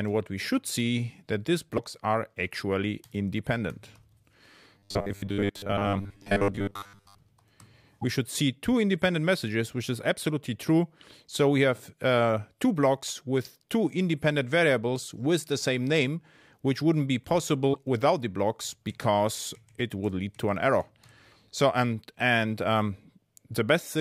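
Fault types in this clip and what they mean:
Broken MP3 bit reservoir: at 1.77, 8.01 and 17.73 s the sound jumps forward with a brief glitch about 30 ms long, close to one 26.1 ms frame. It is likely that frames went missing and the following frame decoded against borrowed bytes from the wrong frame.
Robotic sound from repeated short buffers: from 4.78 to 7.20 s the sound turns into a rigid metallic buzz at 100 Hz, which fits a 10 ms chunk being replayed. Most of that stretch is repeated material, likely because new audio arrived too late.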